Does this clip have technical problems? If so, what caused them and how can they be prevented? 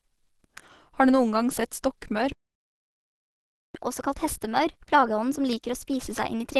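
Yes. Throughout, the audio sounds rough and grainy with a hoarse edge, and a spectrogram shows nothing above 12.1 kHz. This likely comes from Opus compression at a low rate, which fits its hybrid speech mode near 16 kbps. Encoding at a higher bitrate prevents this.

From 2.32 to 3.75 s, just after "du noen gang sett", the sound stops dead for about 1.43 s. The waveform shows a flat line there. This is likely a playback stall, where the player ran short of data or its thread was blocked. A larger playback buffer prevents it.

From 3.75 s to the end, the player plays its backlog 1.15 times faster, raising the pitch by about two semitones. A spectrogram shows the harmonics shifted upward and events compressed in time. This catch-up at higher speed can be avoided by skipping ahead or time-stretching without a pitch change.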